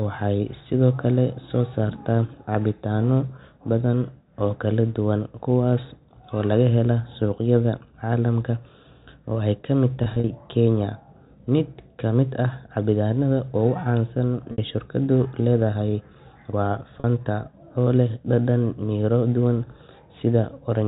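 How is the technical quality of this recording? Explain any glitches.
The telephone-band speech, limited to 4 kHz by G.711 coding, has three brief glitches from packet loss with pitch repetition, at 10.04–10.24 s, 14.52 s and 17.0 s. The receiver bridged each gap by looping the last pitch period, so the voice briefly holds a buzzy, slightly frozen tone. A plain dropout would instead produce silence or clicks. At 10.04 s about 80 ms went missing in scattered bits over 200 ms. Then 60 ms and 40 ms, which fits 20 ms packets.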